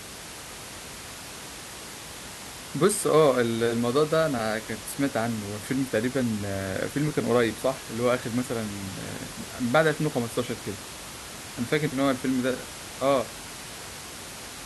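No technical faults are audible.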